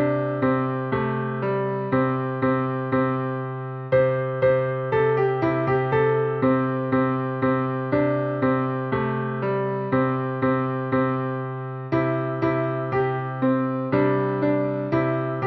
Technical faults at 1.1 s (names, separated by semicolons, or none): none